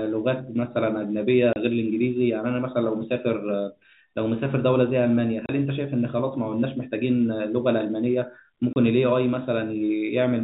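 Three brief holes cut through the speech, at 1.53, 5.46 and 8.73 s, each lasting 30 ms, with hard edges as the sound drops out and returns. This is packet loss filled with silence. Each gap matches a single lost packet, and the receiver played silence in its place rather than concealing it. Across the clip the narrow telephone band of G.711 coding can be heard, with nothing above 4 kHz.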